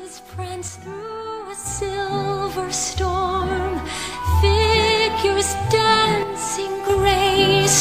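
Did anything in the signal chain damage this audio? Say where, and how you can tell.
Yes. Twice the level drops abruptly by about 6 dB and then recovers just as suddenly: from 0.68 to 1.66 s and again from 6.23 to 6.90 s. The likely cause is one channel dropping out in the analogue wiring, such as a stereo lead or connector losing contact in one leg. Once the two sides are summed to mono, material shared by both loses half its contribution, hence the 6 dB step, and anything carried only by the missing side vanishes for those stretches.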